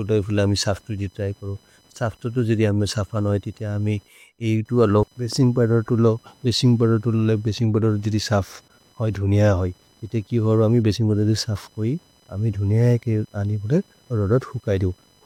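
A faint buzzing whine, pulsing at around 1 kHz and sitting roughly 35 dB below the speech, runs throughout. This is computer activity noise: processor or other load changes disturb the shared ground, so the buzz follows the machine's workload rather than the speech.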